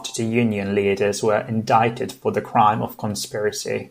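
No technical faults are audible.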